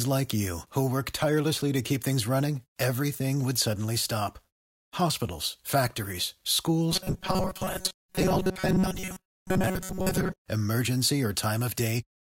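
Robotic sound from repeated short buffers runs from 6.92 to 10.39 s. The speech there collapses into a rigid, metallic buzz pitched at 188 Hz that only loosely tracks the words. The likely cause is audio arriving too slowly, so the playback fills the gaps by looping a very short stretch, about 5.3 ms, which fits that buzz. Most of the stretch, roughly two thirds or more, is these repeats rather than fresh audio.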